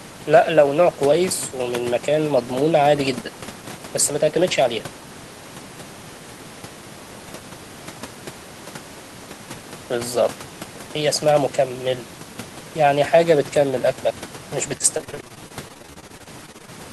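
From 14.77 s to 16.70 s the speech breaks up with repeated packet loss, heard as a robotic sound. Packets go missing in quick succession, each hole no longer than about 27 ms, and every one is papered over by extending the last stretch of audio. With roughly a quarter of that span filled in this way, the result is choppy and robotic, with fragments missing. The room noise, about 21 dB below the speech, sits underneath throughout.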